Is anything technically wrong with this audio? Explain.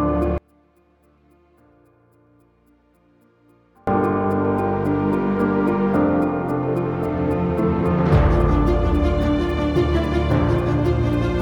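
Yes. From 0.38 s to 3.87 s the sound nearly disappears, falling by about 37 dB. The likely cause is one channel inverted. When one side of a stereo pair has its polarity reversed, anything shared by both sides cancels once they are summed to mono. Centred material and bass drop out almost entirely. What remains is only the difference between the channels, heard here as a faint residue until the level returns.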